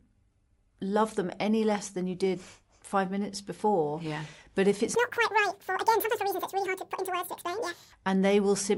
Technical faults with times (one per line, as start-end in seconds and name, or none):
4.95-7.93 wrong sample rate